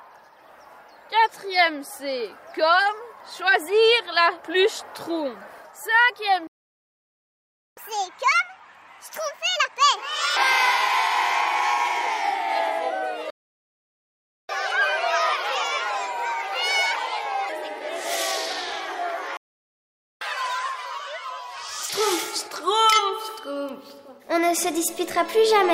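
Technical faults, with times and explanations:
6.47–7.77 s, 13.30–14.49 s and 19.37–20.21 s, playback stall: the sound just drops out mid-flow for about 1.3 s, then 1.19 s, then 0.84 s, and picks up again afterwards. It's dead silence rather than a fade, so the output simply had nothing to play. That's most likely the player running dry on its buffer or having its playback thread blocked for a moment.
7.77–10.37 s, 14.49–17.49 s and 20.21–21.90 s, catch-up at higher speed: right after each gap the player rushes through its backlog by resampling, so tempo and pitch climb together. It's 1.5x speed (roughly seven semitones up) after the first and third gaps, and a milder 1.25x (around four semitones up) after the second. That's why it sounds chipmunky before snapping back to normal.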